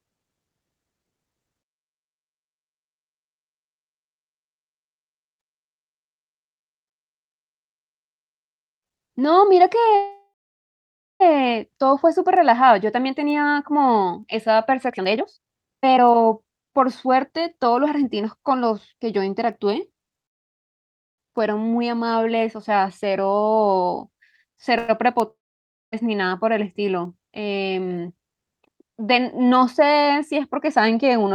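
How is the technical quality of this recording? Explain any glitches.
The recording is a speech call with several network-related glitches: three call audio freezes, one long network dropout, and two jitter buffer speed-ups.

Call audio freezes occur at 9.95–11.22 s, 20.26–21.20 s and 24.78–24.90 s. The cause is likely packets arriving late and the jitter buffer running dry. The receiver stretches the last sound into a fading buzz, then resumes exactly where it paused. The first lasts about 1.25 s, with roughly 0.9 s of near silence. The second is about 0.92 s and almost entirely silent. The third is a brief 0.1 s smear with no silence. No speech is skipped in any of them, which sets them apart from the dropout.

The long network dropout runs from 25.31 to 25.94 s. No audio likely reached the receiver for about 0.62 s. After a short fading tail, about 0.57 s of silence follows. When the speech returns, it has moved on, because that 0.62 s was never played. 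The skipped content is the difference from a freeze, which adds a pause but loses nothing.

Jitter buffer speed-ups occur at 14.89–18.94 s and 27.97–28.43 s. Both times the receiver held more buffered audio than it needed and trimmed small pitch-period slices to catch up. The first runs at 130% speed and removes roughly a second in total, so the talker sounds noticeably rushed. The second is milder, at 113%, and removes about 70 ms. The pitch stays unchanged, so the effect is hurried delivery rather than a higher voice.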